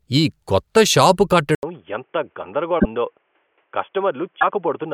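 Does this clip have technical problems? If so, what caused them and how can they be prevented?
Yes. Right after "ఈ కొత్త షాపు", at 1.55 s, there's an 80 ms gap and then the speech goes boxy, cut off above 3.4 kHz, about 5 dB quieter, with a new noise floor roughly 45 dB down, until the end. That's likely the input switched to a poorer device. Locking the input device for the session prevents it.

At 2.78–2.85 s and 4.40–4.44 s the audio jumps forward, the signature of a broken MP3 bit reservoir, likely from dropped frames forcing the next ones to borrow bits from the wrong frame. Cutting or streaming MP3 only at frame-safe points, or using a codec without a reservoir, avoids it.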